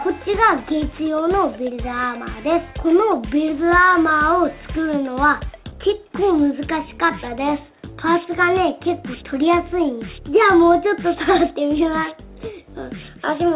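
No technical faults can be heard in this clip. The call path shows in a band that stops at 4 kHz with nothing above it, which fits a G.711 mu-law codec at 64 kbps.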